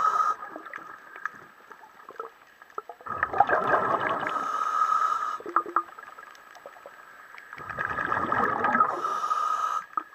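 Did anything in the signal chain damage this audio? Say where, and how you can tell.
Yes. From 3.64 s to 8.44 s there is a doubled audio track: a full-band copy about as loud as the original, trailing by roughly 200 ms. It starts and stops abruptly with no decay or room colour, which rules out echo or reverb. The likely cause is a second, slower capture path or an editing step that left two copies out of step.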